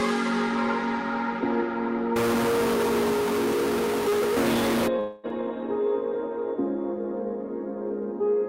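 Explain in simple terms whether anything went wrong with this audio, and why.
From 2.16 to 4.88 s a distortion is laid over everything, and the quiet moments fill with noise instead of going still. That points to a stuck bit, likely a single line in the digital data jammed at one value so about half the samples are knocked off by a fixed amount. Unlike ordinary clipping, it isn't tied to loud peaks: the quieter parts are spoiled too.

Just after, from 4.99 to 5.26 s, the audio stops arriving and the last sound is stretched into a fading smear for about 240 ms. When the sound resumes, roughly that much of the original has simply gone, skipped rather than delayed. That is a long network dropout, likely a pause in delivery over a connection. It differs from a brief packet loss, which would be a tiny blip; here a quarter of a second is covered over and missing.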